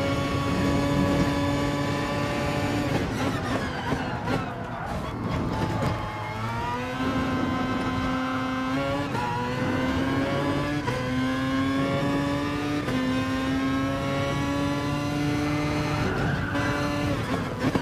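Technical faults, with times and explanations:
4.99–6.74 s, periodic USB or driver dropouts: about fifteen tiny gaps of roughly a millisecond, each filled with silence, land every 0.125 s and are heard as evenly spaced ticks. That strict, clock-like spacing separates them from random clicks or crackle, which fall unevenly.
14.73 s to the end, mains buzz: a 60 Hz buzz, about 30 dB below the signal, sets in and stays. Sharp switching spikes give it harmonics reaching into the kilohertz range, so it sounds raspy and edged rather than like a smooth, low ground-loop hum.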